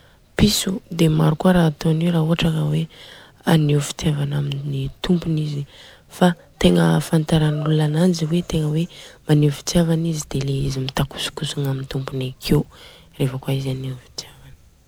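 Speech throughout, with generation loss: swirly, hollow and smeared, attacks blurred, most likely from about three successive MP3 encodes, consistent with roughly 128 kbit/s each pass.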